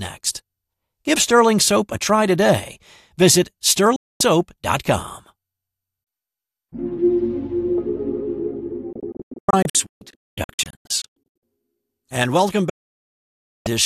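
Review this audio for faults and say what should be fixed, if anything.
The receiver stopped getting decodable frames and muted, a digital broadcast dropout, three times. At 3.96 s the sound drops out through a 3 ms fade for 0.24 s, which fits ten lost 24 ms frames. From 8.93 to 11.43 s it breaks into scattered holes totalling 1.32 s, the longest 0.22 s. From 12.70 to 13.66 s it falls silent for 0.96 s. What was sent during those gaps is gone.

Stronger signal margin at the receiver, or more robust error protection on the transmission, would prevent these mutes.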